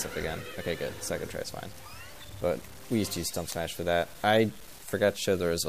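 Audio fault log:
throughout: low bit depth without dither. Grainy distortion follows the sound, about 25 dB below it. Likely 7-bit truncation, so quiet parts turn gritty.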